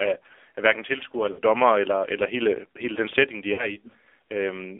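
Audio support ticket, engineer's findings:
AMR narrowband mobile codec, throughout: band limited to about 300 Hz to 3.6 kHz, buzzy and synthetic texture from the pulse-driven vocal tract model. The coarse sound fits a low AMR-NB mode near 7.4 kbps; codec damage plainly audible.

Lost AMR speech frames, 1.32 to 1.40 s and 3.54 to 3.77 s: sound smeared and drawn out, then fading, as the decoder repeats the last good pitch and vocal tract settings at falling gain. The first gap fits three dropped 20 ms frames, the second two. Probable component: radio link.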